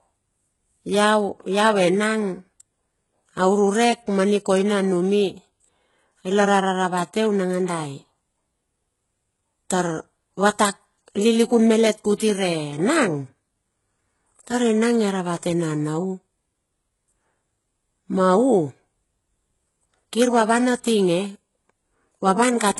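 From start to finish, the speech has a treble that sounds bright but synthetic: sibilants come out gritty and metallic, and nothing is present above about 11.5 kHz. This is likely HE-AAC compression at a very low rate, fitting roughly 12 kbps, with heavy damage. Band replication copies lower bands upward to fake the top end, so its harmonics don't line up with those below. A plain low-pass would sound dull instead of falsely bright.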